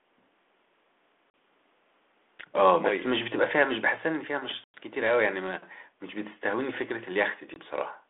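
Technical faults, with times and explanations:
1.30–1.34 s, 4.64–4.77 s and 7.54–7.57 s: packet loss on an ADPCM call. The speech drops into hard-edged silence for about 40 ms, 100 ms and 20 ms, which fits roughly two, five and one lost packets. ADPCM sends only differences from a running prediction, so the gap leaves the receiver's predictor and step size out of step with the sender's. Speech resumes with brief, slight distortion that settles within tens of milliseconds.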